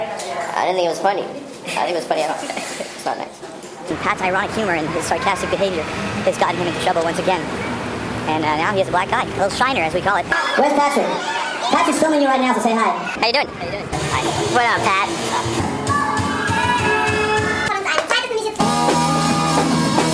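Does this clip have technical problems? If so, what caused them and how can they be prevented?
Yes, wrong sample rate throughout: the sound runs about 1.38 times fast and about 5.5 semitones high. Pitch and tempo rise together, unlike a pitch shift, which fits 16 kHz audio played at 22 kHz. To prevent it, tag the true rate and resample before playback.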